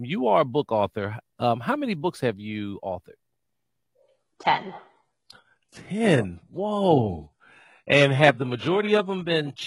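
From 4.02 s to the end, an adaptive stream at a lower bitrate takes over without a gap. Treble above 11.4 kHz vanishes, and coding artefacts thicken.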